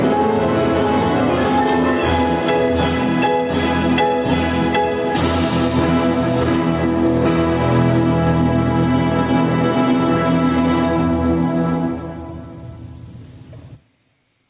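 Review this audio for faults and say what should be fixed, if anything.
There's gain pumping all the way through, with the gain swinging by around 20 dB, likely input gain set too high with a fast limiter clamping it. Back the mic gain off so the limiter isn't constantly grabbing.

A loud pop hits from 1.69 to 1.71 s, a single sharp spike roughly 10 dB above the sound, likely a voltage step from a plug, switch or static discharge. Secure the cables and avoid touching connectors or switches while recording.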